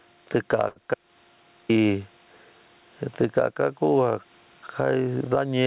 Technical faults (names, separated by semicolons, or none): gain pumping; short stall from a late packet; audio dropout to silence